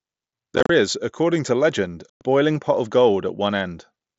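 Speech over a wideband mSBC headset link shows unconcealed Bluetooth headset packet loss. From 0.56 to 0.70 s, just before "is according to legend", about 83 ms of audio drops out in scattered gaps, the longest 30 ms, giving a chopped texture. From 2.10 to 2.21 s, between "is according to legend" and "pot of", roughly 113 ms of lost packets become holes with abrupt edges, because no concealment fills them.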